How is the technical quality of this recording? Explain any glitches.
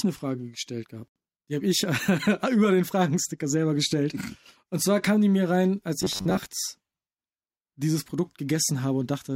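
The recording has one clear glitch. From 6.02 to 6.46 s, right after "die mir rein als", the speech turns into robotic sound from repeated short buffers. The voice becomes a rigid, metallic buzz pitched near 94 Hz, while the words stay roughly traceable. The likely cause is audio arriving too seldom, so the software keeps replaying a fragment of about 11 ms. About half of the passage is repeated material, and that real speech is skipped. The fixed repetition rate forces that steady buzz pitch.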